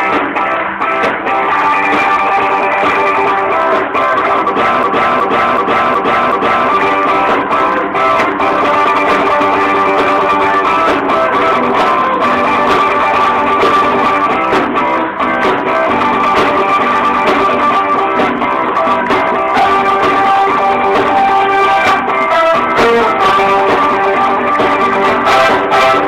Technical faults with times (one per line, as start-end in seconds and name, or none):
4.83-6.69 system hang loop